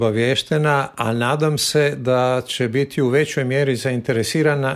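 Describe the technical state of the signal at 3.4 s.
The signal at 3.4 s is intact, with no dropout, distortion, glitch or other fault audible at that moment.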